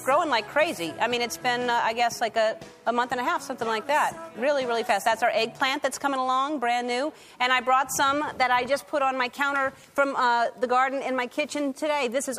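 Nothing goes wrong here at any point, so there's no technical fault to walk through.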